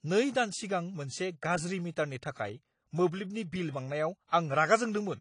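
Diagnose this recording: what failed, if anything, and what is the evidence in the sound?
Speech sounds dull and smeared throughout, with nothing above 10.2 kHz. This is likely AAC compression at the codec stage, fitting a low bitrate near 32 kbps.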